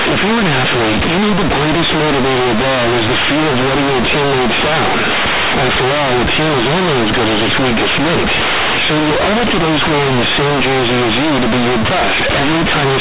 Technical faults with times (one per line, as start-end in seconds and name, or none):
0.00-13.00 companded audio read as linear